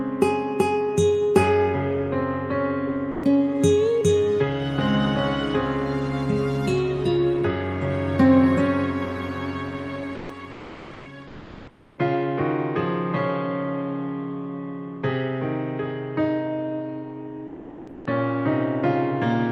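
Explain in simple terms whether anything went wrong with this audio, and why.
Short bits of sound cut out and give way to a plain hiss at 3.11, 10.15, 10.51 to 11.05, and 17.47 to 18.05 seconds. This is sound dropped by the voice detector, which likely mistook real sound for background and briefly stopped sending it. From 11.27 to 11.97 seconds, the natural background turns into a flat, featureless hiss. This is comfort noise in place of the background, likely generated by the receiving end to fill a pause in transmission.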